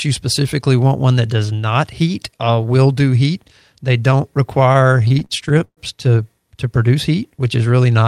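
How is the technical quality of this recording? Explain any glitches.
One fault stands out: repeated stalls (stutter) between 4.63 and 5.80 s, where packets arrived late and the drained jitter buffer kept stretching the last sound. Seventeen short holds, the longest 126 ms, make the speech drag and stutter, with nothing lost.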